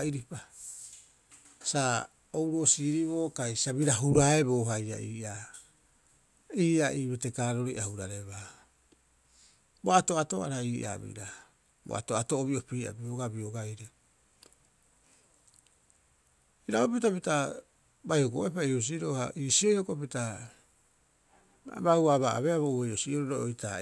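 No technical faults can be heard anywhere in this recording of speech. Nothing in it calls for a timestamp or any further comment.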